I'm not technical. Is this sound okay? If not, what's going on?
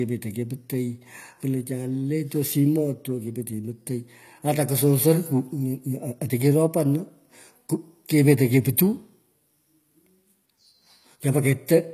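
No. The speech has a problem that runs through the whole clip. It sounds like HE-AAC compression damage, and it is plainly audible. This kind of compression keeps only the lower sounds properly. It then fakes the treble by copying lower sounds upward. The fake treble doesn't quite match, so s sounds come out gritty, metallic or lispy. Nothing above 14.9 kHz is left. The likely cause is saving or streaming the file at a very low quality setting.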